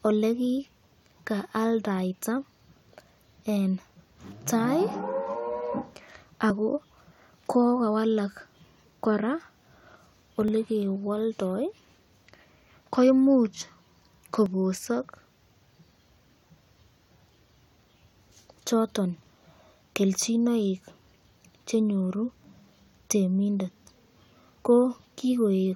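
Overlap between stream segments causes tiny skips in this speech at 6.50, 10.48, 14.46 and 22.44 seconds, spaced at multiples of four seconds, which matches the 4-second segment length. At each seam the two segments' time stamps claimed the same stretch, so the player trimmed a few milliseconds that had never actually been duplicated. The waveform jumps across the missing piece, and each one is heard as a short click or a tiny hiccup in the speech.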